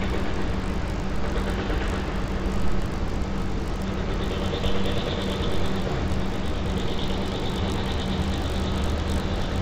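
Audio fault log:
Throughout: resampler restarted on every block, so each 20 ms block edge gets a small error, giving a 50 Hz buzz under the sound, fitting a 16 kHz to 48 kHz conversion.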